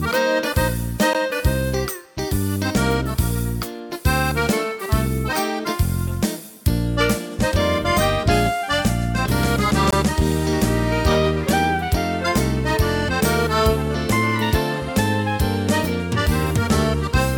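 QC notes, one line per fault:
1.13 s and 9.91 s, block of digital silence: sound drops to silence for 14 ms, then 20 ms, stopping and resuming abruptly, unlike a faded dropout.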